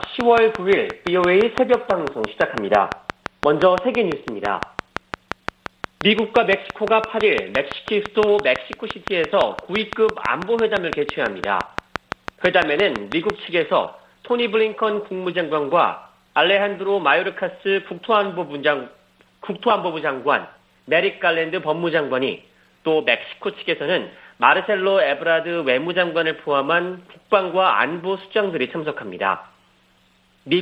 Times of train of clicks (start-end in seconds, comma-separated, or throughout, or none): 0.04-13.31